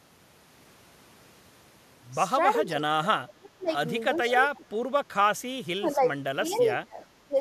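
An echo canceller that likely could not tell the talker from loudspeaker echo while both sides spoke clamps the speech, so it dips by up to about 30 dB. This speech suppressed in double talk occurs at 2.63, 3.25, 4.2, 5.76, 6.33, 6.83 and 7.25 s. Within the 6.33 s dip, an echo leak, likely from a loudspeaker path the canceller did not fully clean, sends back a faint copy of the speech delayed 425 ms, heard as a brief scrap around 6.49 to 6.57 s.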